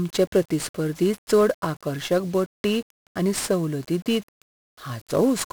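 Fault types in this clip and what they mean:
1-bit DFPWM compression: Present throughout the speech. The coder keeps a single bit per sample, and each bit only nudges an adaptive level up or down, so the waveform is traced as a staircase of rises and falls rather than stored accurately. That coarse tracking leaves heavy broadband quantisation noise riding on every syllable, making the speech fuzzy and crackly, with the upper frequencies sunk beneath hiss, a degree of damage that fits a stream of around 48 kbps.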